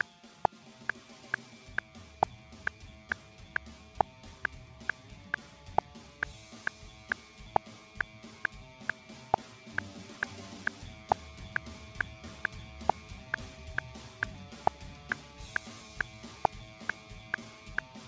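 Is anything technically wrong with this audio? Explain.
No, nothing technically wrong is audible in this recording.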